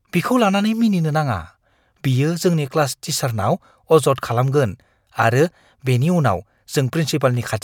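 No audible technical faults occur anywhere in this recording.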